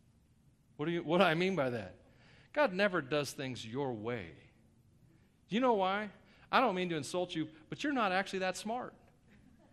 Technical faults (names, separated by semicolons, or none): MP2 compression